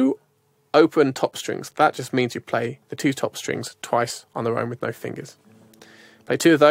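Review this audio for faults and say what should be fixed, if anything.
No faults turn up in this audio, so nothing needs to be fixed.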